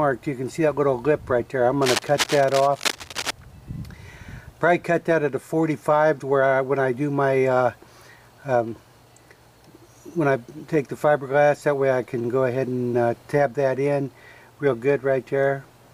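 From 1.82 s to 3.31 s a burst of cable scratch noise runs over the sound, heard as scratching and rustling that sits only about 5 dB below the signal. The likely cause is a worn cable, connector or control carrying a DC voltage being moved, so its contact resistance jumped around rapidly. On a waveform this shows as dense, irregular spiky bursts; a spectrogram shows broadband, patchy vertical streaks across that stretch.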